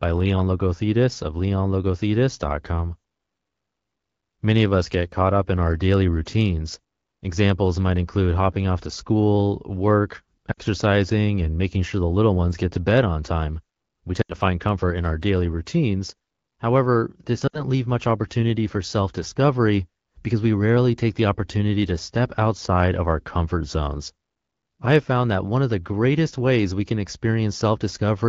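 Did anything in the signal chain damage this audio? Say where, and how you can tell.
Yes. Lost AMR speech frames on the radio link cause brief dropouts to near silence of 60–80 ms at 10.51, 14.21 and 17.47 s, as the decoder repeats its last speech settings at falling gain.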